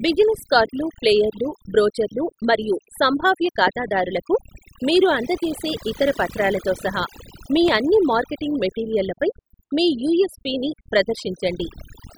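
Overdone noise removal runs through the whole recording. The noise reduction was set so aggressively that any frequency band close to its noise estimate was pushed far down or switched off, so the quieter parts of the speech were removed along with the noise. Between phrases the background drops to near silence scattered with twinkling specks. On a spectrogram, the gaps look almost black with isolated bright dots, and the speech shows ragged, patchy harmonics with missing fragments.

A loud pop occurs at 3.67 to 3.70 s and again at 7.68 to 7.71 s. Each is a single sharp pop, roughly 15 dB above the speech, and the speech carries on beneath it. The likely cause is a brief voltage step or pulse, from a switch, static or a driver glitch, shaped by the circuitry that followed it. On the waveform, each pop appears as a narrow spike towering over the speech, and on the spectrogram as a thin vertical line spanning the full frequency range.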